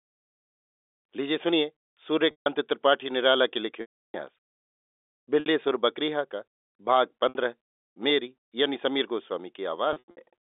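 At 2.31 s, 3.81 s, 5.40 s, 7.29 s and 9.93 s, packet loss with pitch repetition occurs in the narrowband G.711 telephone audio. The receiver fills each gap by replaying the last pitch period and fading it. The 60 ms gaps at 5.40 and 7.29 s sound like a briefly held buzz. The 150 ms and 330 ms losses fade into silence before speech cross-fades back. The final 180 ms loss is broken up, with a longest run of 90 ms.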